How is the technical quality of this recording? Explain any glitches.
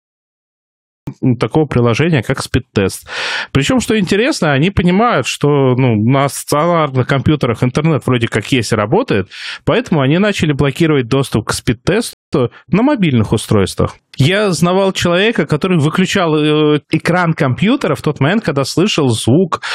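The recording has two clear glitches: an abrupt start and one brief pause partway through.

The first second is a cut-off start. The file holds digital silence until about 1.07 s, then the sound enters already in progress, with no attack or fade. Capture began late. Unlike a fade-in, the level jumps from nothing straight to full.

At 12.13 s there is a rebuffering stall. The sound drops to silence for about 193 ms, then picks up exactly where it stopped. The player ran short of downloaded data and waited. Unlike a packet-loss dropout, nothing is skipped; the gap only adds time.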